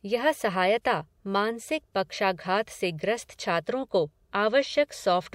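No technical faults are audible.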